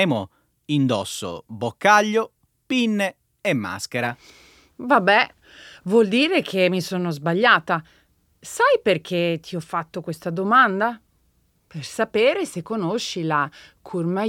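No technical faults are audible anywhere in the speech recording.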